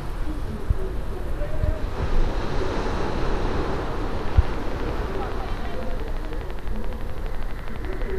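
From 4.19 s to 8.11 s, a train of clicks runs over the sound. The clicks arrive at a steady 11.8 per second, evenly spaced. That makes about fifty in all. Each has much the same shape. They peak a few decibels above the underlying sound. The ticking carries on through quieter moments too. A repeating pulse like this is likely from electrical interference or a faulty connection or power supply.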